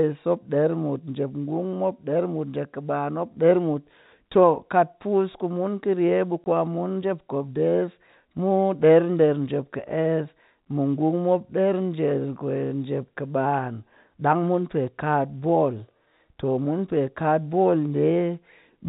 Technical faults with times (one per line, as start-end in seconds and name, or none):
6.44 packet loss filled with silence